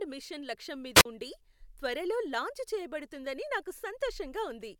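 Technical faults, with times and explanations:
0.95–1.05 s, wireless microphone squelch dropout: Right after "మిషన్ లక్ష్యం", hiss briefly rises, then the output falls to near silence for about 44 ms. The radio link faded, so the receiver's squelch muted it. Speech resumes at "ఉండి త్వరలో లాంచ్ చేయబడుతుందని".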